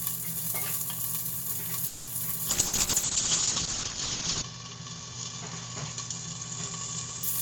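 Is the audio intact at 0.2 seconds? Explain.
Yes, at 0.2 seconds the audio is intact, with no dropout, distortion or other fault at that moment.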